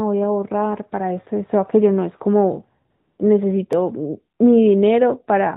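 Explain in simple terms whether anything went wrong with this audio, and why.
From 2.90 to 3.18 s, the real background gives way to a smooth, steady hiss. This is AMR comfort noise: the phone sensed a pause, stopped sending speech and filled the gap with artificial noise.

At 3.73 s there is a tiny tick. It is a block of digital silence, a dropout under a millisecond long where the sound cut to nothing and back with no fade.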